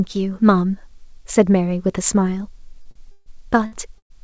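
Short stalls from a late packet at 2.82 to 2.87 s and 2.91 to 2.97 s: each time the jitter buffer ran dry, so the last sound was held for 32 ms and then 43 ms, a slightly buzzy smear, before the audio resumed with nothing lost. A call audio freeze follows at 3.11 to 3.28 s, most likely from packets held up in transit, with the sound continued as a fading buzz for about 148 ms. Another short stall at 3.66 to 3.74 s holds the sound for 59 ms. A second freeze at 3.98 to 4.12 s stretches the sound for 120 ms, about 100 ms of it silent, inserting a gap before the audio carries on. Throughout, nothing is heard above 8 kHz, which fits a G.722 call codec at 64 kbps.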